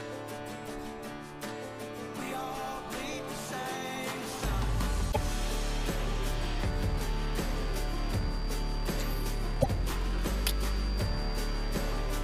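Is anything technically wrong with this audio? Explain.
Yes, there is damaged data in the compressed stream, at 5.08 to 5.17 s and again at 9.58 to 9.66 s, each about 80 ms long. At those points part of the encoded stream arrives wrong, with bytes lost, zeroed or overwritten, so the decoder misreads the affected frames, loses sync and hunts for the next valid frame header. Each time the audio breaks into a short chirp, squawk, click or hole before normal playback resumes.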